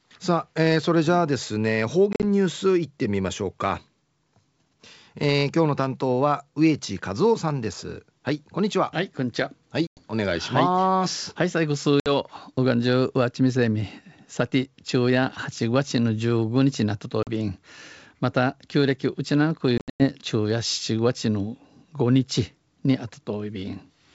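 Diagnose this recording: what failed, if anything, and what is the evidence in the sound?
The network stage failed, causing packet loss on an ADPCM call carried over G.722 wideband coding at 64 kbit/s. Hard-edged silent holes cut the speech at 2.13–2.24 s (70 ms lost in scattered pieces), 9.87–10.02 s, 12.00–12.08 s, 17.23–17.30 s and 19.78–20.04 s (190 ms lost, longest run 100 ms). The gaps were filled with silence, so the decoder's adaptive predictor and step size lost track of the sender's. Speech re-enters slightly distorted before settling.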